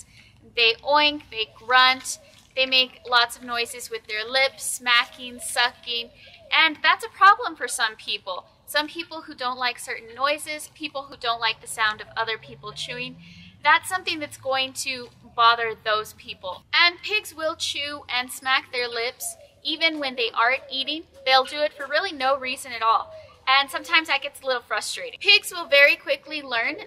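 At 11.12 s the capture side likely failed to collect a buffer of samples before the hardware overwrote it, a dropped buffer (overrun). Roughly 10 ms of audio is lost, and the material on either side is spliced straight together with no gap of silence in between. The result is a skip at that point, with the sound jumping forward abruptly where the missing slice should have been.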